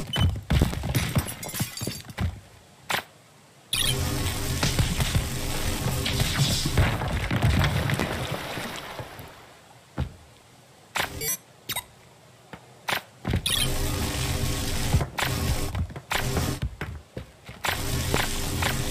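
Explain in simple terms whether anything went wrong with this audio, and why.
Loud pops at 0.62 to 0.77 seconds (two in quick succession), 8.00 to 8.03 and 18.14 to 18.18 seconds: sudden jolts of electricity, likely from a plug, switch or static, jump far above the audio, which carries on underneath.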